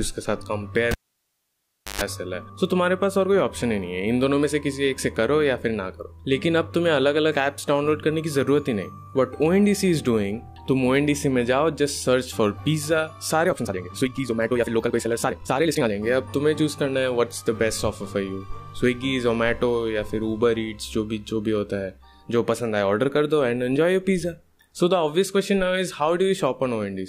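A cable pulled and plugged in interrupts the audio from 0.91 to 2.01 s. A pop is followed by about 1.05 s of near silence, then a 127 ms burst of 50 Hz mains buzz as the plug tip makes contact, and a second pop as the sound returns. The buzz and the paired pops set it apart from a plain dropout. From 13.42 to 15.92 s the audio runs at 1.93 times its pace but keeps its pitch, sounding rushed, which points likely to a time-stretched section. A simple speed-up would have raised the pitch as well.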